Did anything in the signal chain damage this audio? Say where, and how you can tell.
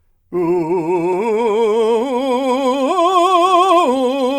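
No, nothing in the signal chain has damaged this music. Listening through, no stage of the chain leaves any audible mark on the recording.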